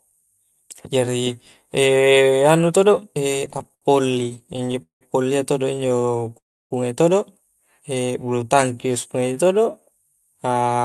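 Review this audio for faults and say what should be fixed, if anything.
From 3.39 to 5.03 s the speech shows repeated stalls (stutter): 24 short gaps, the longest 187 ms, where late packets emptied the jitter buffer and the receiver stretched the last sound. A second burst follows from 5.75 to 6.38 s with 12 gaps of at most 16 ms. A call audio freeze runs from 6.38 to 6.73 s, with the last sound fading into near-silence for roughly 0.3 s, likely from packets held up in transit. From 7.95 to 9.81 s a jitter buffer slow-down repeats pitch periods to rebuild reserve, so the speech runs at about 91% speed at unchanged pitch. The Opus path cuts off the top end above 12 kHz. Preventing these means reducing network jitter and congestion on the link, for example with QoS prioritisation of call traffic, and setting a jitter buffer target high enough to absorb the arrival variance.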